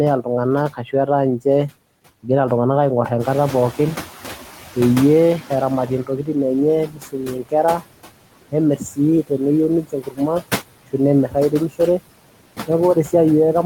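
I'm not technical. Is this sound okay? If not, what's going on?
No, not quite. There are noise suppressor artifacts all the way through: the processing that scrubs out background hiss pushes the noise down hard between phrases, so it pumps up and down with the speech.

Around 3 seconds the room's background noise gets louder. From 3.19 to about 6.0 seconds you hear noise suppressor catching up: the noise comes through fairly strongly at first, then fades over nearly three seconds as the cleanup adjusts to the new level.

There's also speech cut by the noise suppressor at 0.69–1.71, 5.87–6.35, 6.86–7.95, 8.52–9.41, 9.82–10.54 and 11.27–12.0 seconds. The processing mistook quieter bits of speech for noise, so soft sounds and word endings get swallowed. The dips around 7 to 10.5 seconds are the deepest.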